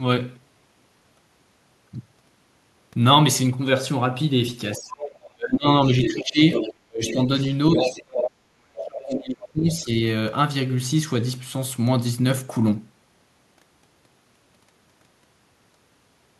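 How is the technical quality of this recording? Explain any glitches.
The recording has clear echo-related problems between about 4.8 and 9.9 s.

Other side's voice leaking through at 4.76–5.3 s (about 15 dB below the talker), then 6.02–6.74 s and 7.07–8.28 s (about 5 dB below). This is likely residual loudspeaker echo the canceller missed. It shows as second-voice harmonics on a spectrogram.

Speech suppressed in double talk at 4.77–6.39 s, 6.84–7.29 s and 7.8–9.9 s, with dips of roughly 30 to 40 dB. The canceller likely ducked everything, so the waveform shows sudden gaps in the talker's envelope.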